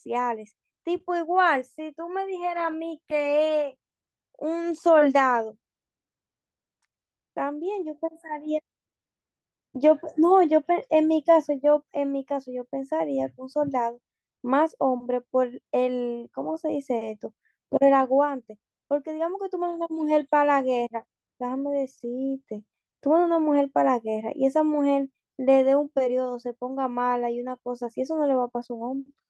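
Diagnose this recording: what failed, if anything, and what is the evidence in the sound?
Network stage: lost packets rebuilt from error correction. Brief rough, noisy patches at 2.55–2.73 s and 7.61–7.87 s, with no gap. Opus played lower-bitrate redundant copies, which fits several separate lost packets.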